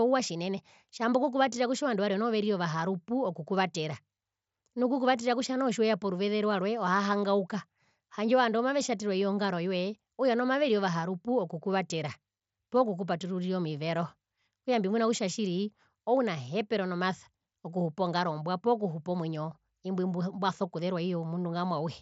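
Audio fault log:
Nothing stood out on listening to this speech recording.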